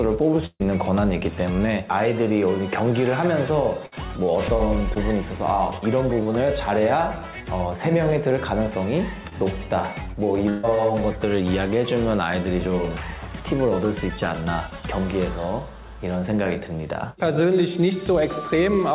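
Burst of packet loss at 0.46 to 0.62 s: about 140 ms of audio never arrived in time, so the receiver stretched the last sound and let it fade, leaving a held buzz or hiss that drops to silence for about 30 ms before playback resumes further on. A shorter burst at 3.86 to 3.94 s skips about 60 ms the same way.

Short concealed packet loss at 4.94 to 4.97 s, 6.23 to 6.27 s and 9.29 to 9.33 s: each time about 20 ms went missing, and the receiver papered over it by extending the preceding sound, heard as a brief smear or wobble.

Burst of packet loss at 10.49 to 10.65 s: another 140 ms gap, bridged by a fading continuation of the last sound that blends straight back into the audio with no silent stretch.

Through all of this the call path's narrow band, with nothing above 4 kHz, fits a 64 kbps telephone codec.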